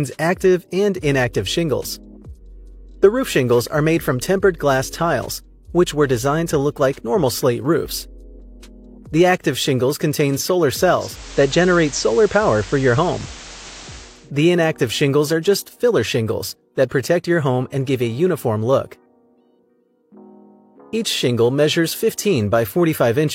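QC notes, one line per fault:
10.86–14.32 s, digital radio blending to analogue: the receiver lost its digital signal and cross-faded over roughly 0.47 s to the station's FM broadcast, then returned. During the FM stretch a hiss floor sits roughly 20 dB below the signal, and the level shifts by about 1 dB, so the change is audible as a noisier patch.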